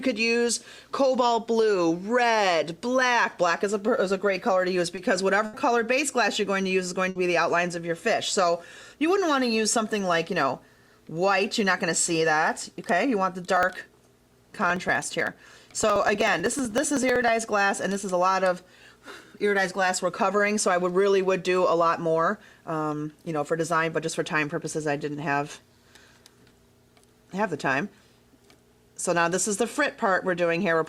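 At 4.95 s, a short concealed packet loss: about 20 ms never arrived, and the receiver extended the preceding sound to fill the gap, leaving a brief smear. Two bursts of packet loss follow, at 5.45 to 5.55 s (80 ms) and 7.09 to 7.17 s (60 ms). Each is concealed by continuing and fading the last sound, so a held buzz or dying hiss replaces the missing audio. From 13.57 to 17.28 s, periodic USB or driver dropouts skip around a millisecond of audio every 63 ms, about seventy times, producing an even train of ticks while sound is present.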